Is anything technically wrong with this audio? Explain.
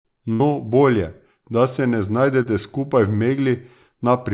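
Yes, there are two packet-loss faults in this speech, heard through a narrowband call path whose band stops at 4 kHz, consistent with G.711 mu-law.

From 0.33 to 0.41 s there is a burst of packet loss: about 60 ms went missing, and the receiver stretched the preceding sound into a fading buzz or hiss before resuming further on.

From 2.43 to 2.46 s there is short concealed packet loss: roughly 30 ms was synthesized from the prior sound, leaving a brief smear or wobble where detail drops out.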